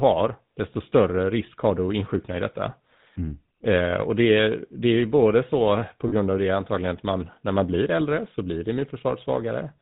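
GSM full-rate codec, throughout: the speech passes through a vocal-tract model driven by regularly spaced pulses, with only every third excitation sample kept, and nothing above 4 kHz survives. The damage is plainly audible as a buzzy, gravelly roughness that fits 13 kbps GSM.

Lost GSM frames, 6.08 to 6.14 s: for about 40 ms the decoder bridges the gap by repeating the last good frame's settings, which fits two lost 20 ms frames. The sound briefly freezes into a rough, metallic ring before normal decoding resumes.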